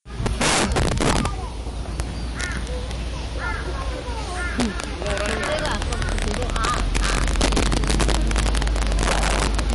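A recording of everyday sound carries three faults. Integer overflow runs throughout: the level was pushed about 14 dB past full scale and the arithmetic wrapped instead of limiting, so the loudest peaks, a few percent of the samples, flip to the opposite sign and come out as violent, sharp cracks, harsher than ordinary clipping. The clip is also likely MP3 compressed at a low bitrate, around 57 kbps: the encoder discards everything above 11.3 kHz and drops weak frequency components frame by frame, leaving a dull top end with audible watery, swirling artefacts and smeared attacks. From 4.8 s to 9.74 s a train of clicks, most plausibly from electrical interference or a faulty connection, lays around seventy similar pulses over the sound at an uneven pace of about 15.6 per second, peaking roughly 15 dB above the sound and heard as ticking.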